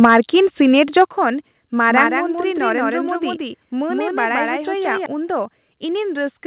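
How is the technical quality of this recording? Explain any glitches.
The recording has three kinds of faults: clipped peaks near the start, repeated sudden drops in level, and a doubled copy of the speech through the middle. The narrowband call sound, with nothing above 4 kHz, is normal for a telephone-grade codec.

Microphone overload occurs at 0.03–0.18 s and again at 0.96–1.02 s. The peaks were pushed about 5 dB and about 2 dB past the converter's limit, likely from an input gain set too high. A few percent of the samples have their tops flattened, giving loud syllables a harsh, crackly edge.

Microphone volume stepped down at 0.05 s by about 4 dB, at 1.05 s by about 6 dB, and at 2.07 s by about 4 dB. Each is a single abrupt drop in speech and background together. This is likely automatic gain control reacting to a microphone that was too loud or clipping.

A doubled audio track runs from 1.90 to 5.06 s. 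A second, full-band copy of the speech trails the original by about 150 ms at roughly equal loudness, with no decay or room colour. It starts and stops abruptly. The likely cause is a second, slower capture path mixed in with the first.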